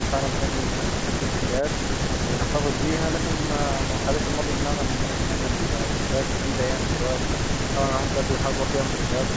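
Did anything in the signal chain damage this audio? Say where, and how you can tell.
No, nothing in the signal chain damaged this audio; the call microphone processing it passed through is working as intended.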